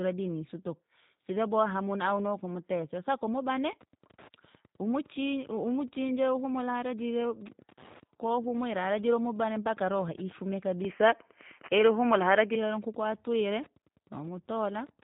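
The whole clip carries G.729 codec damage, and it is plainly audible. The speech is rebuilt from a filter, a pitch predictor and sparse pulses. The sound is rough and synthetic, which fits a G.729A stream at 8 kbit/s. Nothing passes above 3.8 kHz.

Wi-Fi interference starts at 3.72 s and runs to the end. A nearby radio's signal is rectified by the audio circuit. Its beacon ticks every 102.4 ms, about ten times a second, well below the speech.

From 10.85 s to 12.55 s the sound turns duller and boxier, with nothing above 3.1 kHz. There is no gap at the change. The level shifts by a few decibels, and very faint new noise appears. The likely cause is the input switching to a poorer device.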